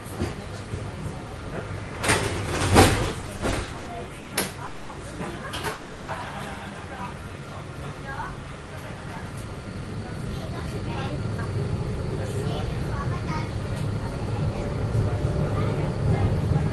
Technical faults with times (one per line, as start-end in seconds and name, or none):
3.21-4.32 repeated stalls (stutter)
4.66-4.91 call audio freeze
5.73-6.10 call audio freeze
7.21-7.42 jitter buffer slow-down
9.06-11.69 jitter buffer speed-up